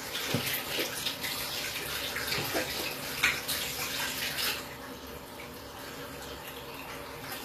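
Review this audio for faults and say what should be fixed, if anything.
The whole clip has a gritty, metallic top end that doesn't quite match the body of the sound, and nothing comes through above 14.9 kHz. That points to HE-AAC compression, likely at around 24 kbps, where the treble is rebuilt from copied lower bands instead of coded directly. Keep a lossless or higher-bitrate master and export from that.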